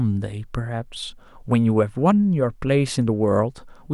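No technical faults can be heard anywhere in the recording.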